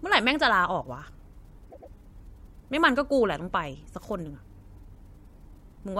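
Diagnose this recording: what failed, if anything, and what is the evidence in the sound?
The failure sits in the codec or storage stage: a short run of compressed frames was delivered more than once, a fault known as repeated frames. At 1.69 s the speech stutters as a 104.5 ms block, consistent with about four compressed frames, is played two extra times, ending at 1.90 s. The decoder plays the duplicated data faithfully, so the same fragment recurs and the recording grows by 209 ms.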